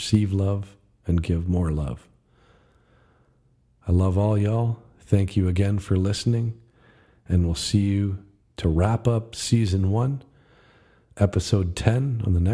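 No technical faults can be heard anywhere in the speech.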